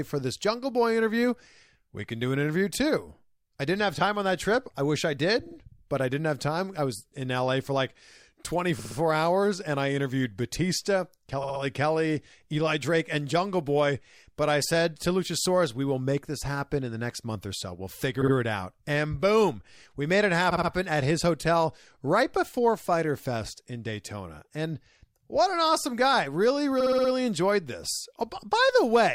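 Repeated frames make the speech stutter at 5.46, 8.79, 11.43, 18.21, 20.51 (after "boom we made it") and 26.80 s, where a 50–60 ms block replays two to five extra times, up to 300 ms added. Spectrograms show identical tiled slices.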